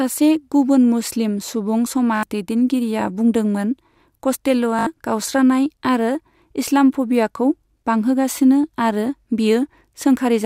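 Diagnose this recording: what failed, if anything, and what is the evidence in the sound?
The Bluetooth link dropped audio packets twice, and the receiver covered each gap by replaying its last buffer. At 2.16 to 2.23 s and 4.79 to 4.87 s, about 75 ms becomes a rapid repeating buzz, which fits roughly four lost packets. After the second, the speech picks up further along at "गावस्रानाय आरो इस्लाम'फबियाखौ बांहोगासिनो".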